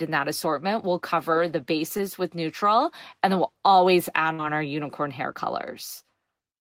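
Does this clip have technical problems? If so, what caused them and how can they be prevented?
Yes, two network faults. At 1.97 to 2.01 s there's short concealed packet loss: about 20 ms of audio arrived too late, and the receiver filled it by extending the preceding sound, so you hear a quick smear or wobble. More jitter-buffer headroom or forward error correction would prevent it.

At 4.33 to 4.40 s a burst of packet loss drops about 60 ms. The decoder stretches the last sound into a fading buzz or hiss, then jumps ahead with that stretch simply gone. Redundant packets and a steadier, less congested connection would prevent this.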